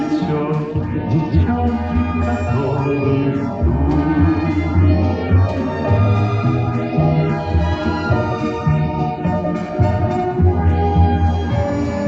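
Nothing is technically wrong with the audio in this clip.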